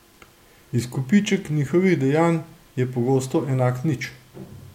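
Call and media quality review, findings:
No technical faults are audible in this speech recording, so there is nothing to log against the signal path.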